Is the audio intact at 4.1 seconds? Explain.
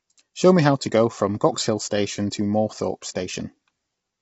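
No. At 4.1 s, as across the whole clip, the speech is rough and grainy with plainly audible low-delay AAC compression, likely from short codec frames at a low bitrate. A spectrogram shows noise filling the gaps between harmonics and nothing above about 7.8 kHz.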